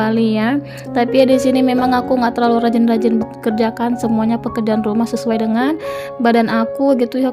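At 3.21 s there is a skip ahead. About a second and a half of audio was dropped. Playback jumps forward with no gap, and the two sides join directly.

From 3.35 s to 7.24 s there is a jitter buffer speed-up. The receiver trimmed short pitch-period pieces, about 0.4 s in all. Audio runs at 111% speed without changing pitch, and sounds hurried.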